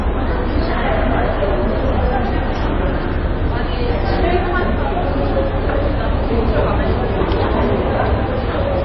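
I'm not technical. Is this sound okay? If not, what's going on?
No. Throughout, nothing above 5.8 kHz survives, and the sound turns watery and swirly, likely from heavy MP3 compression running short of bits.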